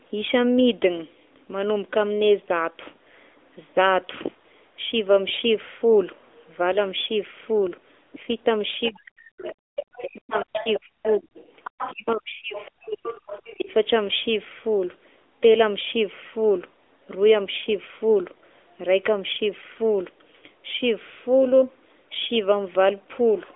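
Throughout, the speech carries the sound of the AMR narrowband mobile codec. Energy stops hard near 3.8 kHz and sits mostly within roughly 300 Hz to 3.6 kHz, leaving an empty band above on a spectrogram. The plainly audible buzzy, synthetic grain fits a rate around 10.2 kbps.

A second, fainter voice appears briefly at 8.83 s, then from 9.45 to 11.94 s at about 15 dB below the main speech, and from 12.53 to 13.55 s at about 20 dB below. This is other side's voice leaking through, likely because an echo canceller missed loudspeaker playback. On a spectrogram it shows as weak, separate harmonic traces under the main speech.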